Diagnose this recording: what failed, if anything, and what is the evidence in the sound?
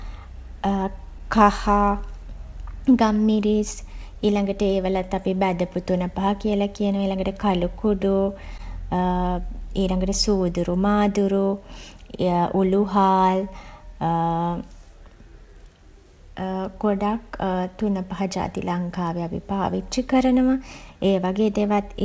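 The fault sits at the buffer stage: clock drift between sender and receiver. The sender's sample clock runs roughly 2% slow relative to the receiver's, so the jitter buffer is fed slightly less audio than it plays out and keeps drifting toward empty. Across the whole speech clip the receiver has to compensate continually. The drift itself is silent, but it shows up as small, unevenly spaced timing hiccups rather than a single clean event.

The compensation produces repeated timing corrections from 0.00 s to 21.77 s. Because the sender is slow, every edit goes the same way: the receiver repeats or stretches short fragments to fill the shortfall. The net effect is playback at about 98% speed, with roughly half a second of material added over the stretch. Each correction is tiny and heard, if at all, as a faint stutter or slightly unsteady pacing, over a G.722 call path whose bandwidth stops at 8 kHz.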